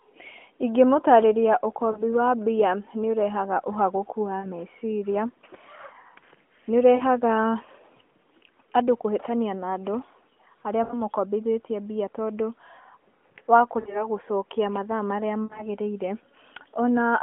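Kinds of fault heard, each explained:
Lost AMR speech frames: corrupted mobile frames were concealed by repeating the last good pitch and spectral settings at falling gain, briefly smearing the narrowband speech six times, in 40 to 60 ms gaps.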